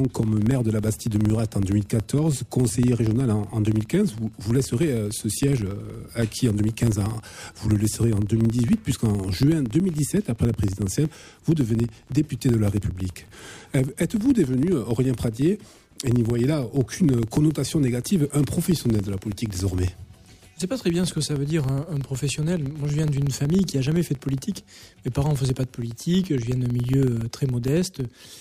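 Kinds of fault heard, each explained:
Filter restarted on every block: a steady low buzz near 21.5 Hz runs through the whole clip, rising and falling with the sound's level. The filter drops its stored state at each block boundary, so every block starts with a small transient, and the rate fits 2048-sample blocks.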